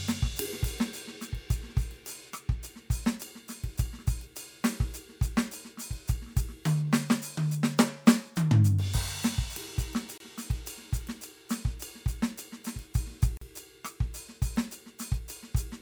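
Gaps at joins of encoded pieces at 10.18 s (24 ms) and 13.37 s (42 ms): separately encoded music segments were spliced untrimmed, leaving encoder delay and padding as brief silences.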